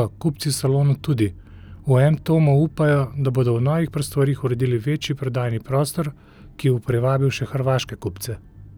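No technical faults are audible anywhere in the recording.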